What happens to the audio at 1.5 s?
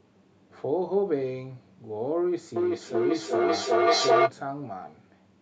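Nothing goes wrong at 1.5 s; the speech there plays through intact, with no dropout, click, distortion or other fault at that moment.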